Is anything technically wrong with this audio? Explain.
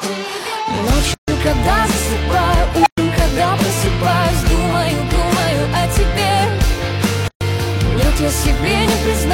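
Yes, there are two kinds of fault.

From 1.14 to 1.28 s and again from 7.28 to 7.41 s, continuous sound drops out for about 140 ms and then 130 ms: a gap at a join of encoded pieces, six seconds apart. Each piece kept its encoder's start-up silence and last-frame padding when joined. The waveform shows a flat stretch with nearly vertical, slightly softened edges, and the spectrogram shows an empty vertical band before the sound resumes where it stopped.

At 2.80 s an unstable filter sets off a squeal around 700 Hz. A recursive filter with bad coefficients feeds its output back with growing gain. The tone swells for about 65 ms, clips, then overflows and cuts to silence for about 116 ms until the filter resets, ending at 2.98 s. The waveform shows a fast-growing envelope flattened where it clips, then a flat line. The spectrogram shows a bright horizontal line that intensifies and then disappears.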